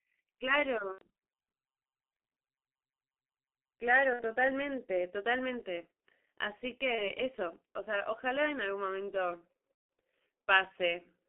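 Throughout, the speech sounds muffled and hoarse, with smeared consonants and nothing above 3.4 kHz, which points to heavy G.723.1 codec damage at a rate that fits 6.3 kbit/s. At 0.92, 4.13, 6.95 and 9.74 s the sound turns into a fading buzzy tone or coloured noise for up to 0.15 s. This is VoIP packet loss concealed by the speech codec, which extrapolated the missing audio, covering 90, 60, 30 and 150 ms.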